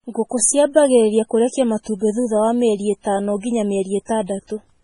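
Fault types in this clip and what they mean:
MP3 compression: the whole clip has nothing above about 10.6 kHz, with a watery, swirly quality to the speech and metallic chirps on s sounds. That's the heavy damage you'd expect when the encoder is starved of bits, likely a low-bitrate MP3 around 24 kbps.
Pre-echo: a hiss creeps in just ahead of two sharp attacks, about 34 ms before one at 4.09 s and 25 ms before one at 4.50 s. The codec spreads noise across each block, so it leaks into the quiet before the onset.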